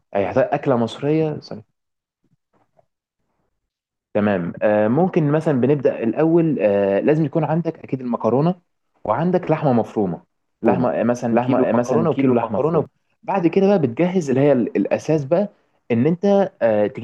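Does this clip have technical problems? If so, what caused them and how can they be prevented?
Yes. From 10.66 to 12.86 s there is a doubled audio track. A dry copy, about as loud as the original, trails it by roughly 0.7 s. It starts and stops abruptly. A slower second capture path is the likely cause. Route each source through one path only.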